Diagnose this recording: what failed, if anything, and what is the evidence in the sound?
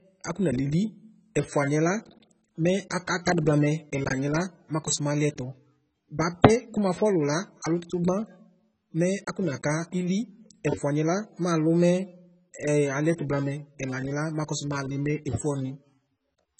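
Codec stage: throughout, the speech has nothing above 8.3 kHz and sounds dull and warbly, likely from heavy AAC compression at a very low bitrate; the smeared artefacts, unlike a clean low-pass filter, point there.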